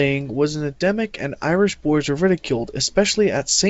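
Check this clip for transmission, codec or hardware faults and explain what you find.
Nothing stood out on listening: the speech arrives through a G.722 call path, and its lack of content above 8 kHz is simply what that wideband codec passes.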